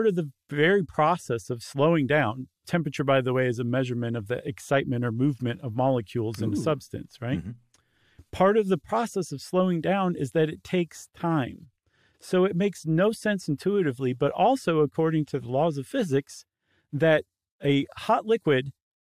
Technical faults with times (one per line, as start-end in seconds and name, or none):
none